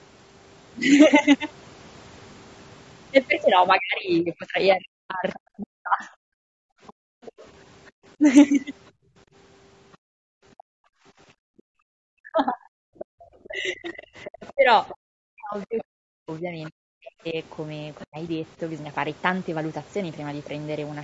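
Throughout the clip the speech has a rough, grainy texture, with noise filling the gaps between harmonics and a top band that sounds thin and synthetic. This is likely low-delay AAC compression (AAC-ELD) at a bitrate around 32 kbps. Its short frames resolve pitch harmonics poorly and spend bits that a low rate cannot spare, so the codec damage is plainly audible on every voiced stretch.

From 3.77 to 6.23 s the talker's speech is suppressed in double talk. It dips and breaks up in pieces, at worst by roughly 40 dB, for about two seconds in total. This is likely the echo canceller turning down both sides because it cannot separate the talker from the loudspeaker echo.

Overlapping that, from 4.18 to 7.47 s, the other side's voice leaks through. It sounds faint, roughly 25 dB below the talker, and is likely loudspeaker echo that the canceller did not fully remove.

From 6.49 to 13.19 s the background is gated by the echo canceller. 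The room sound drops out by as much as about 40 dB for around three seconds in total, then returns once the canceller releases. Within that span, at 9.92 to 9.97 s, a very brief, very faint scrap of the other side's voice leaks through, far below the talker.

From 12.16 to 18.17 s the speech is again suppressed in double talk. Dips of up to roughly 40 dB take out about three seconds of the talker in chopped pieces. Alongside this, from 12.99 to 18.06 s, the other side's voice leaks through more strongly, at roughly 20 dB under the talker.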